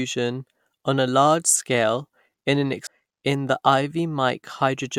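Speech clip with an abrupt forward jump and small blip at 2.86 s, just after "large scale in an", likely a stream segment skipped when one segment failed to load.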